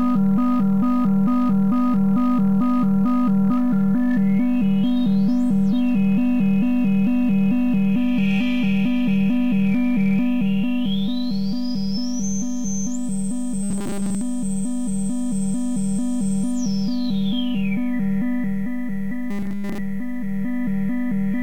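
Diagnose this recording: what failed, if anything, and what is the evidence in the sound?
A rigid, metallic 200 Hz buzz covers most of 13.63 to 14.22 s and all of 19.31 to 19.79 s. This is robotic sound from repeated short buffers, likely at a starved driver or buffer stage looping a 5 ms chunk while real audio is skipped.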